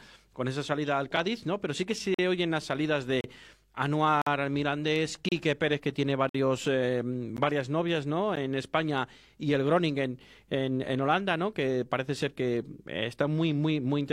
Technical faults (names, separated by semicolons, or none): gap between stream segments